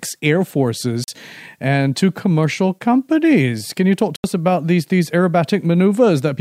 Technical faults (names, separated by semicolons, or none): block of digital silence